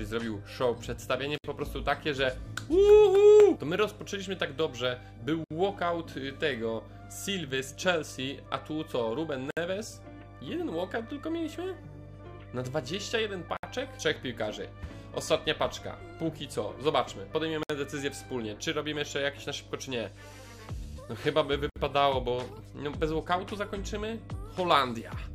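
A steady mains hum at 50 Hz sits under the whole clip, roughly 20 dB below the signal. It is a ground loop or nearby transformer leaking the power line in, and it stays a smooth low tone rather than the bright, harmonic-rich rasp of a buzz. Short silences of about 64 ms open at 1.38, 5.44, 9.51, 13.57, 17.63 and 21.70 s, about 4 s apart. These are gaps at the joins of encoded pieces, where encoder start delay and last-frame padding were left in. Unlike packet dropouts, they are evenly spaced, equal in length, and the sound resumes exactly where it stopped.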